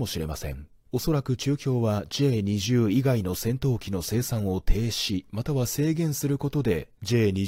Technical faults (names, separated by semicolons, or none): none